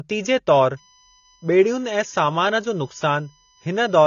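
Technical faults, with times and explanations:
Throughout, AAC compression: the speech sounds dull and a bit smeared, with nothing at all above 6.9 kHz, and the damage is plainly audible. That hard ceiling and the swirly, slightly fizzy edge on sibilants likely come from AAC-LC squeezed down to a low rate, which fits something around 24 kbps. With that few bits the encoder pulls its cut-off down and quantises the remaining bands coarsely, so detail smears across each frame.
0.77 to 4.07 s, USB whine: a steady, fixed-pitch whine comes in at 0.77 s and sits under the speech to the end, roughly 30 dB below it. It's built on a 1 kHz fundamental, with the strongest component up at 7 kHz, the seventh harmonic. That spacing is the signature of the USB bus polling in 1 ms frames. Its current draw leaks through the power or ground into the audio path, and because that timing never changes, neither does the pitch.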